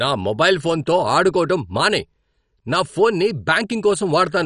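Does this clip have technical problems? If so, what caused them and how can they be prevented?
Yes. The speech carries MP2 compression damage from start to finish. Nothing is heard above about 11.3 kHz, so it sounds dull. A gurgling, granular distortion sits on the speech throughout. The likely cause is MPEG Layer II coding at a low rate, which fits a bitrate around 48 kbps. Too few bits reach the 32 sub-bands, so upper bands drop out and flicker. The remaining bands are coarsely quantised. Encode at a higher bitrate, or use a more efficient codec, to prevent this.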